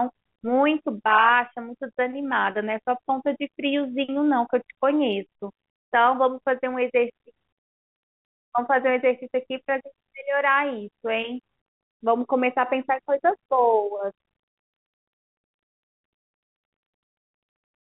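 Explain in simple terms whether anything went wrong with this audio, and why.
Nothing went wrong here.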